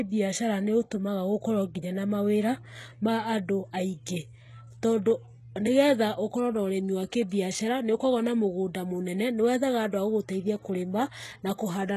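From start to finish the speech carries plainly audible codec damage, likely from HE-AAC compression at a rate that points to around 16 kbps. Only the lower band is truly coded; the treble is rebuilt by copying lower bands upward, so s sounds come out gritty, metallic or lispy. On a spectrogram the upper region looks like a smeared, repeated copy of the band beneath it, with harmonics that fail to line up, and nothing appears above 12.4 kHz.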